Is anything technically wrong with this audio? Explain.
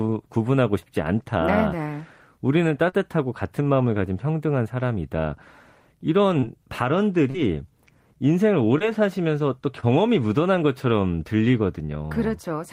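Yes. The speech has short concealed packet loss at 0.79, 2.89, 6.40, 7.30, 8.78 and 9.80 seconds. Each time, about 20 to 40 ms of audio failed to arrive in time. The decoder filled the gap by extending the preceding sound, carrying on its pitch or shaped noise, and then crossfaded back into the real signal. The result is a brief smear or wobble. On a spectrogram, harmonics run flat and blurred for a few tens of milliseconds. On the waveform, that stretch shows repeated cycles.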